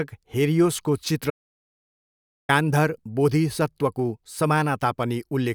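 At 1.30 s the speech cuts off into total silence, with no room tone, until 2.49 s, when it resumes mid-flow on "गान्धर बोधिसत्वको". This audio dropout to silence erases about 1.19 s, likely from the input briefly disconnecting or muting while recording continued writing zeros.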